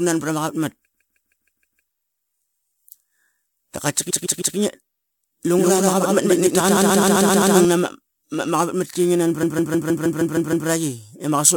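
This speech clip stutters four times, replaying a short block over and over: a 0.16 s block at 0.93–1.87 s, 4.09–4.56 s and 9.42–10.67 s, and a 0.13 s block at 6.76–7.54 s. These are repeated frames, with compressed data sent again and lengthening the audio. From 5.58 to 7.65 s an equally loud, dry copy trails around 150 ms behind and switches abruptly on and off, a doubled audio track likely caused by a second, slower capture path.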